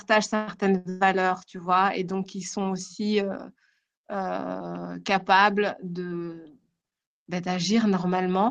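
A speech clip with three early interruptions. Two are call audio freezes, at 0.35 to 0.50 s and 0.89 to 1.03 s, just before "tu vois et donc". The last sound carries on as a fading buzz or hiss, for about 121 ms and 114 ms. Then the speech resumes where it stopped. Nothing is lost, but the timing slips back. Packets were likely held up in transit, leaving the jitter buffer empty. Between them, at 0.78 to 0.87 s, is a short stall from a late packet. A sound is held about 77 ms too long, then the speech continues with nothing missing. The packet arrived late and the buffer ran dry.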